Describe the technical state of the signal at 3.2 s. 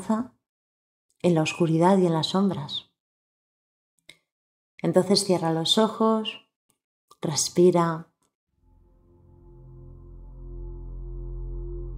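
At 3.2 s the signal is intact, with no dropout, distortion, glitch or other technical fault audible at that point.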